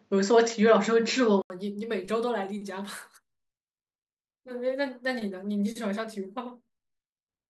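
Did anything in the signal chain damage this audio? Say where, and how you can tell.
Yes. From 0.0 to 1.5 s nothing passes above 7.6 kHz, then an 80 ms silence precedes fuller sound with a level shift of about 5 dB, likely an input switched to a poorer device. The gap and the noise-floor change distinguish this from codec band-limiting.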